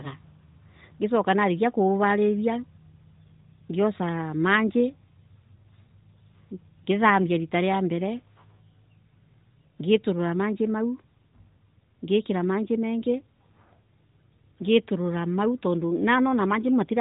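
Nothing in the recording stood out as a technical problem on listening, beyond the narrow, band-limited character of the AMR narrowband mobile codec it passes through.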